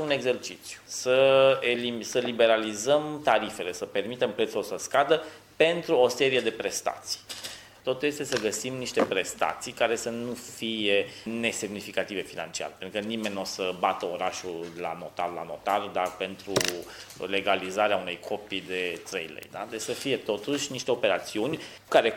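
Word clock ticks run from 0.67 s to 21.64 s: about twenty short clicks, spaced roughly one second apart. They point to a digital link read by a device on its own free-running clock. The two clocks differ by something like 20 parts per million, so about once a second they slip past each other. A single sample is then dropped or repeated, breaking the waveform and leaving a brief tick in the audio at that steady rate.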